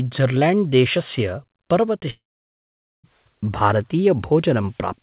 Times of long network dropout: 2.10-3.05

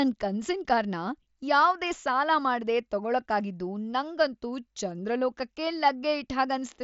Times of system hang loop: none

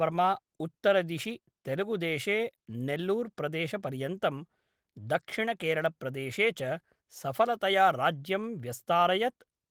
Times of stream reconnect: none

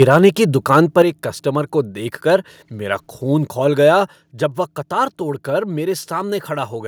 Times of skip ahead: none

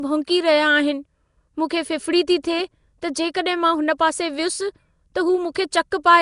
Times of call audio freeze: none

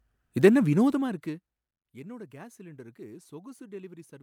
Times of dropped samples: none

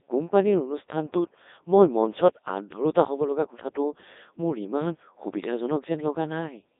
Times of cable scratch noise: none

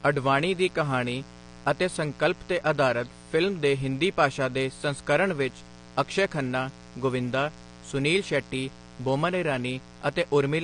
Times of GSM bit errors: none

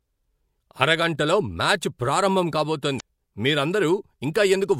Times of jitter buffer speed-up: none

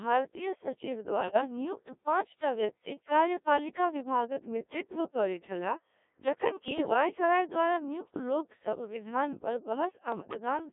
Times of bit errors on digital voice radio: 1.17-1.41, 6.68-6.94, 10.12-10.37

